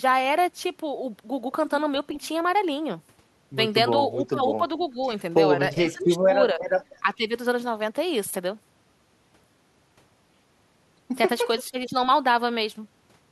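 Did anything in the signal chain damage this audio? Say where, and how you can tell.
Yes, call processing. Speech suppressed in double talk: the speech dips by about 10 to 20 dB at 4.3–4.6, 4.92–4.99, 5.82–6.6, 7.0–7.32 and 11.67–11.94 s, likely an echo canceller ducking during overlap. Unlike network dropouts, these are partial level dips, not clean gaps.

Echo leak, also in call processing: faint delayed copies, about 20 to 30 dB down, appear at 4.81–4.85, 5.89–6.04 and 11.84–11.9 s, likely loudspeaker pickup the canceller missed. The fixed 435 ms delay marks them as discrete echoes, not room reverberation's continuous tail.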